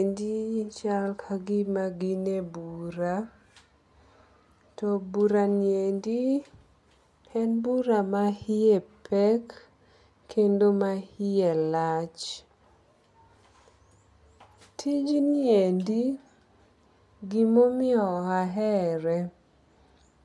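No technical faults can be heard anywhere in this speech.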